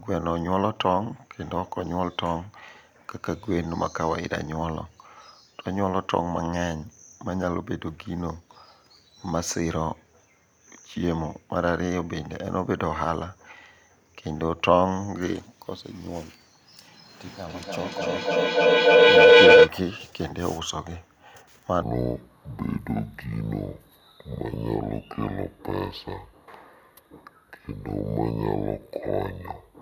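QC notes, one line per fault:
17.25–19.74 s, feedback howl: a tone around 500 Hz swells to about 14 dB over the speech, pulsing roughly every 300 ms. Mic and speaker are feeding each other with gain on every lap, so the loop locks onto one frequency until it's broken.
21.82–29.82 s, section at the wrong speed: from here to the end, speech plays at 0.62 times normal speed, about seven semitones lower and noticeably dragged. Pitch and tempo fall together, which likely means this stretch was played back against the wrong clock.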